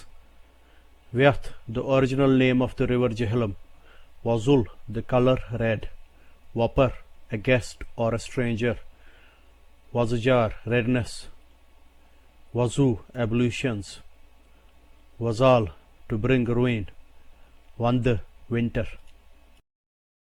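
No technical faults can be heard anywhere in the signal.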